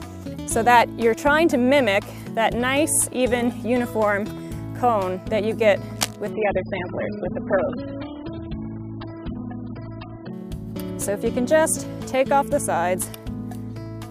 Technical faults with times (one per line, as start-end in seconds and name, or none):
5.96-6.16 cable scratch noise
6.33-10.33 adaptive stream at a lower bitrate